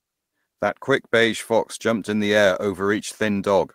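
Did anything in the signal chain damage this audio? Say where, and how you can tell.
No, nothing in the chain, from the analogue wiring through to playback, leaves an audible mark on this speech.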